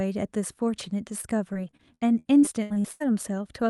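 From about 1.21 to 3.02 s there's repeated packet loss, giving that robotic sound. Chunks keep dropping out, the longest around 79 ms, and each hole gets papered over by stretching the last bit of audio. Roughly a quarter of that stretch is patched-in filler, which is why it turns choppy.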